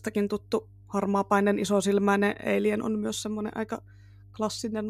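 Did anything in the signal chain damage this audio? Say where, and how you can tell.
Yes, mains hum in the analogue wiring: a steady 50 Hz tone sits under the speech throughout, roughly 25 dB down. Its fixed pitch distinguishes ground-loop coupling from broadband rumble.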